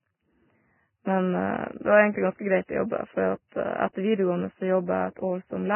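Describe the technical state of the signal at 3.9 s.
A brief hiss rises just ahead of the onset at 3.93 to 3.95 s, so the attack arrives softened and smeared rather than crisp. This is pre-echo, spreading about 24 ms before the transient. A transform codec scatters its quantisation noise evenly across each block, and when a sharp onset lands late in one, the noise sized for that loud moment also fills the quiet stretch just before it.

Around this point, as through the whole speech clip, the sound is dull and grainy, with nothing above 3 kHz and a coarse, hissy roughness on the remaining upper frequencies. The likely cause is heavy Vorbis compression, with the damage pointing to a bitrate near 10 kbps. At that rate the encoder pulls its cut-off down and quantises the treble so coarsely that fine detail collapses into noise of similar energy, which blurs attacks like the one here.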